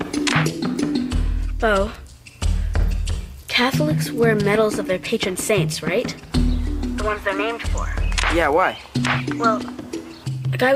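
At 1.95 s a sharp snap sits on top of the sound. It is an electrical switching spike. It is very brief and peaks around -20 dBFS. A nearby switch or motor arcing is the likely cause. The audio line picked up that burst.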